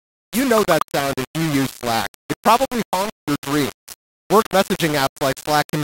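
From start to finish the speech carries a coarse, grainy distortion that rises and falls with the voice, the signature of low bit depth without dither. The likely cause is rounding to roughly 4 bits with no dither, so the error tracks the waveform rather than forming steady hiss. It sits only about 10 dB under the signal, making quiet syllables gritty, while the softest passages sputter between adjacent steps or drop out entirely.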